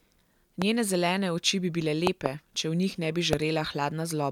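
A sudden voltage step, likely from a plug, switch, static discharge or driver glitch, gets added to the signal three times, and each one sounds as a loud pop standing far above the speech, roughly 20 dB louder. The first lands at 0.62 to 0.64 s, just before "zelene oči bi bile". A double pop spans 2.07 to 2.28 s, between "zelene oči bi bile" and "če v". The last falls at 3.33 to 3.35 s, right after "ne bi". The speech carries on beneath each one.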